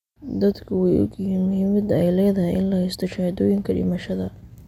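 At 0.52 s a corrupt frame is decoded: flipped bits across a couple of frames misplace spectral energy, giving a brief chirp, squeak, blip or burst of noise, unlike a dropout's silence.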